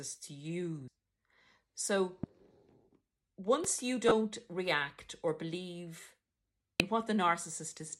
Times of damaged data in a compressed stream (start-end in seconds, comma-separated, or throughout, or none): 0.88, 4.08-4.11, 6.80